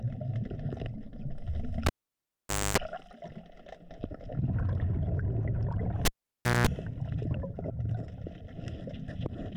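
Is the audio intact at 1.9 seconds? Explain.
No. At 1.9 seconds the audio sits inside a cable pulled and plugged in fault running from 1.86 to 2.78 s. A pop marks the cable coming out, then about 0.86 s of near silence that includes a 0.26 s burst of 50 Hz mains buzz as only the tip makes contact, and a second pop when the signal returns. A waveform shows two sharp spikes around a flat gap. A spectrogram shows vertical broadband lines and horizontal stripes at 50 Hz and its harmonics.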